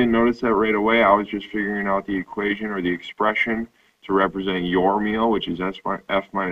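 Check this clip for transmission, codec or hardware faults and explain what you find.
No transmission, codec or hardware faults can be heard anywhere in the clip; the signal holds steady without any break or added disturbance.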